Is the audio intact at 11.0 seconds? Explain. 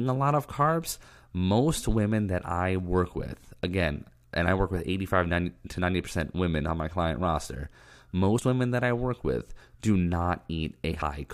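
No. Between 10.99 and 11.02 s whole compressed frames are skipped, so the speech jumps ahead by about a tenth of a second. The speech cuts abruptly from one point to a later one at the join.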